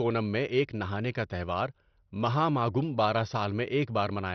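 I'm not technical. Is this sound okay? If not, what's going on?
No. Throughout the speech the sound is dull, with nothing above about 6.2 kHz, and it has a gurgling, grainy edge. That is likely heavy MP2 compression: the encoder ran short of data, shut off the upper frequency bands and roughly approximated the rest.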